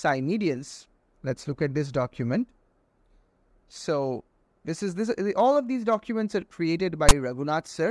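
A short burst of file tags played as audio sits near the end of the clip, from 7.09 to 7.11 s: a block of text tags decoded as sample data gives a loud rasp offset to one side with hard edges. A waveform shows that brief block pushed off centre, and a spectrogram shows a broadband vertical stripe.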